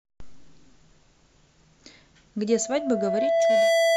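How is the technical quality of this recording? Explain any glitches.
The recording has one clear fault: loudspeaker feedback squeal. From 2.48 s to the end, a steady 665 Hz tone rises over roughly a second until it sits above the speech. A microphone is re-amplifying its own loudspeaker, and at that pitch the loop gain exceeds one, so the tone keeps growing.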